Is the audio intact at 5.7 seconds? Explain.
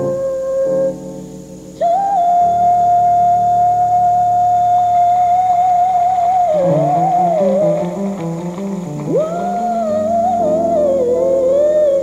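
Yes, the audio at 5.7 seconds is intact, with no dropout, click, distortion or other fault at that moment.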